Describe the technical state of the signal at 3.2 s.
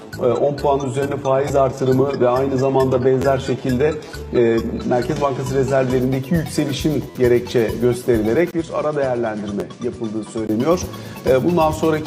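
At 3.22 to 3.24 s there is a brief buzzy stutter: one tiny slice of sound plays three times in a row with hard joins, and about 20 ms of audio is lost. This is a repeated buffer. New audio arrived late, so the device replayed its last block. Each repeat lasts about 11.6 ms, which fits a 512-sample buffer.

Underneath, the sound is dull and smeared, with nothing above 12.3 kHz and strong codec artefacts. This is an adaptive stream starting at a low bitrate. The player began on a very lean version, consistent with HE-AAC at about 16 kbit/s, and jumps cleanly to a fuller one, consistent with AAC-LC at 96 kbit/s, at 6.0 s.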